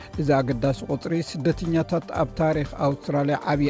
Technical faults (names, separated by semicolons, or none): none